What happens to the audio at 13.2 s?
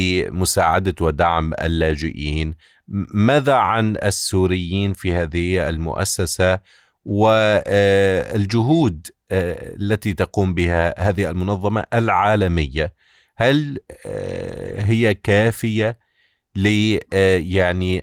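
Nothing goes wrong at 13.2 s: the speech there is intact and continuous, with no dropout, click, distortion or other audible fault.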